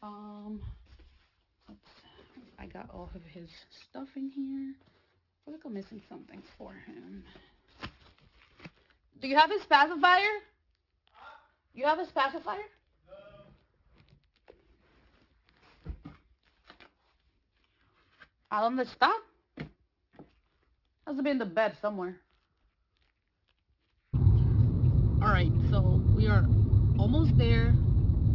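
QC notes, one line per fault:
throughout: aliasing, energy above 6 kHz folds down as unrelated gritty tones, fitting an unfiltered drop to 12 kHz; spectrogram shows mirrored traces packed against 6 kHz.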